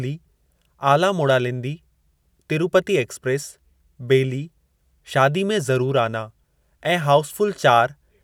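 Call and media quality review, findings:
No audible faults found in the speech; nothing to attribute to any component in the capture, transport or playback path.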